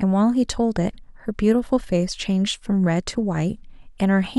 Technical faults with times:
none

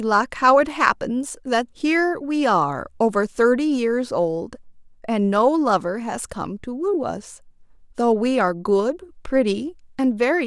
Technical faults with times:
none

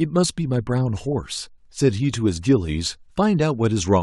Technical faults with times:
none

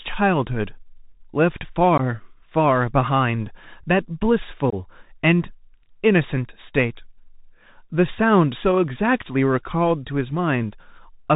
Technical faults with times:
0.00-11.35 Bluetooth CVSD headset codec
1.98-2.01 unconcealed Bluetooth headset packet loss
4.70-4.74 unconcealed Bluetooth headset packet loss

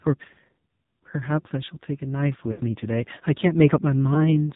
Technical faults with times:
0.00-4.55 AMR narrowband mobile codec
2.52-2.60 lost AMR speech frames
4.14-4.34 lost AMR speech frames

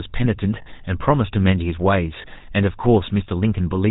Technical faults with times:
0.00-3.90 GSM full-rate codec
0.62-0.67 lost GSM frames
2.22-2.26 lost GSM frames

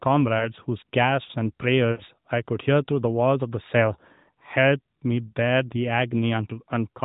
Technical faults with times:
0.38-0.45 lost AMR speech frames
1.92-2.03 lost AMR speech frames

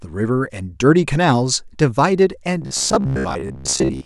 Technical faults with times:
2.62-4.06 robotic sound from repeated short buffers

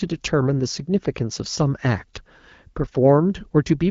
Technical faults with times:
none

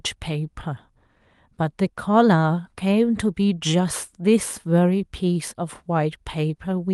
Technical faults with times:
none

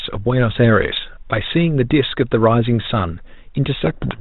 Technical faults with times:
3.84-4.20 codec payload misread

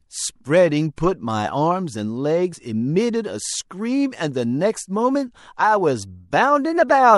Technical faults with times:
0.00-7.18 MP3 compression
2.52 compressed frames skipped

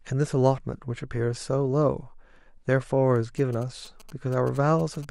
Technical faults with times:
3.16-5.05 GSM signalling bursts

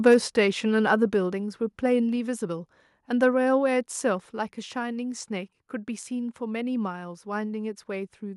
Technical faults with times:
0.06-0.15 microphone overload
0.14 microphone volume stepped down
1.14 microphone volume stepped down
4.20 microphone volume stepped down

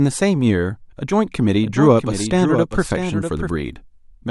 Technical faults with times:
1.62-3.50 doubled audio track

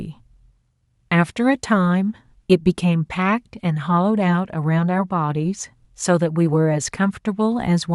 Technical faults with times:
none

